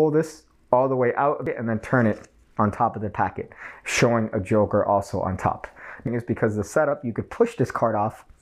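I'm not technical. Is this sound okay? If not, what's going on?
No. Twice, part of the compressed audio data got damaged, which is called damaged data in a compressed stream. The player misread those bits and had to hunt for the next good piece, so you hear a brief chirp or blip at 1.47 s and again at 6.07 s.

Between 2.79 and 3.34 s, and again from 6.91 s to the end, the sound suddenly plays about 6.4% faster and a bit over a semitone higher; the first time it snaps back at 3.34 s. This is likely a drift correction step, where software keeping two clocks in line jumped the playback speed to catch up.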